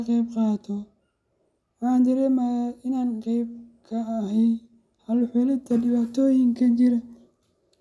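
No technical faults are audible anywhere in the recording.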